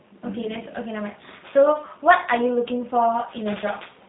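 Throughout the speech, G.729 codec damage is plainly audible. Nothing passes above 3.8 kHz, and the voice takes on a rough, synthetic edge from being rebuilt out of a vocal tract filter, pitch predictor and sparse pulses, consistent with G.729A at 8 kbit/s.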